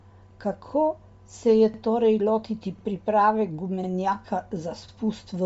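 Speech recording with a band-limited, grainy and breathy texture and nothing above about 7.7 kHz, likely from Bluetooth LC3 compression at a low rate, consistent with about 32 kb/s. Overlapping chunks cause a stutter at 1.74, 2.79, 3.84 and 4.88 s. Each join repeats about 48 ms of audio, once per second, matching 1 s processing chunks.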